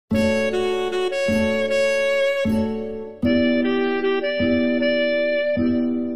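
At 3.25 s an adaptive stream at a lower bitrate cuts in gaplessly until the end. The spectrogram goes blank above 5.6 kHz, and the treble is cut off, which fits an MP3 of about 16 kbit/s.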